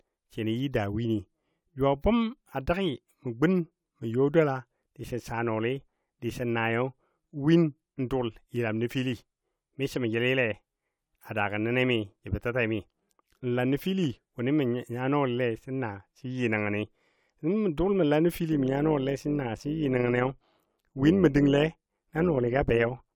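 From 18.52 s to the end at 23.16 s, overlap-add ripple sets in. The speech was cut into windowed frames and rejoined with overlaps that don't sum to a constant gain, so the level dips and swells by about 6 dB around 100 times a second, a metallic buzz with extra tones around the voice.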